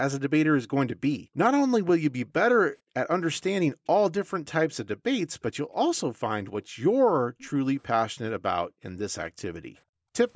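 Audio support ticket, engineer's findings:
Background gated by the echo canceller: room tone dips by up to about 40 dB at 1.18–1.37, 2.82–2.94, 6.43–6.76, 7.19–7.38, 8.64–8.83 and 9.53–10.14 s, mostly brief, the last about half a second. Echo canceller suppression clamps the mic during loudspeaker playback, then releases.

Echo leak: faint delayed copy of the speech at 7.38–7.5 s, trailing about 458 ms behind and roughly 30 dB under the direct speech, right as the gate releases. Likely residual loudspeaker pickup not fully removed by the far-end echo canceller.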